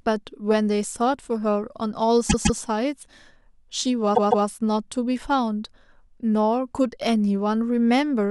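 Repeated frames occur at 2.29 s and again at 4.14 s. Each time, a block of compressed audio about 157 ms long, which fits a run of six frames, is decoded and played twice more, so the same fragment of speech is heard three times in a row. The result is a mechanical stutter lasting to 2.60 s and 4.46 s, and each event stretches the clip by about 314 ms.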